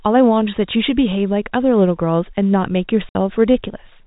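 At 3.09 s the speech drops out and returns at 3.15 s. This is packet loss filled with silence. About 60 ms of audio never arrived, and the receiver played nothing in its place. The gap length points to two lost packets of 30 ms each. The sound stops dead and restarts abruptly. Around the hole, the narrow telephone band of G.711 coding is audible, with nothing above 4 kHz.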